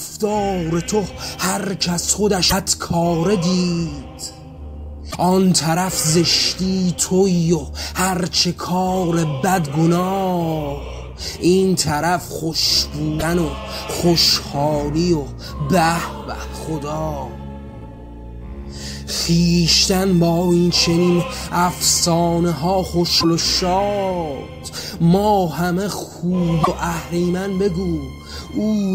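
A likely broken MP3 bit reservoir after dropped frames makes decoding borrow stray bytes, giving brief jumps with a chirp, noise burst or short hole at 2.49–2.53, 5.10–5.15, 13.19–13.23, 23.20–23.24 and 26.63–26.68 s.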